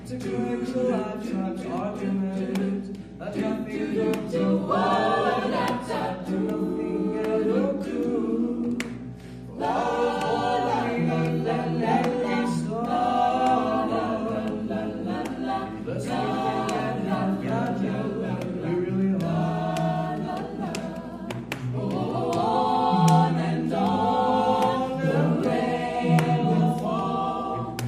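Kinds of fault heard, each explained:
Mains hum: a ground loop or nearby transformer leaks the 60 Hz power line into the signal, leaving a steady low drone throughout, roughly 10 dB below the sound.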